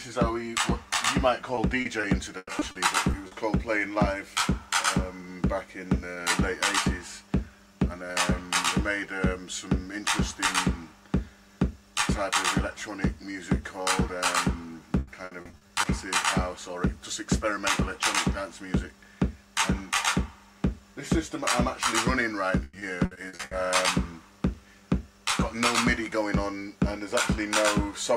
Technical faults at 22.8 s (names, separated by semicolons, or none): repeated packet loss (robotic sound)